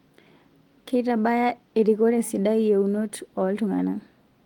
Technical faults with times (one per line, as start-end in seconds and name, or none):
none